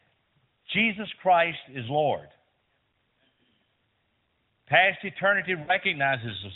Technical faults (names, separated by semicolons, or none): lost AMR speech frames